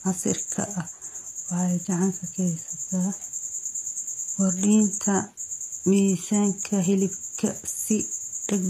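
HE-AAC compression runs throughout this speech clip, with plainly audible damage and nothing above 14.9 kHz. The treble sounds rebuilt from lower bands copied upward, likely by spectral band replication, so harmonics misalign and s sounds turn gritty, which fits about 24 kbps.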